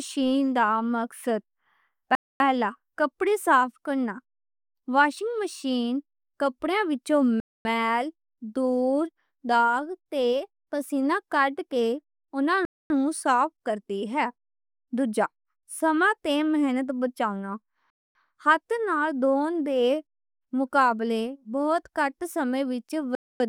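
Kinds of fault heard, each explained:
Gap between chunks: speech arrives in 5-second blocks with 250 ms silent holes between them, at 2.15, 7.40 (after "واشنگ مشین کپڑیاں وچوں"), 12.65, 17.90 and 23.15 s, seen as hard-edged blank columns on a spectrogram.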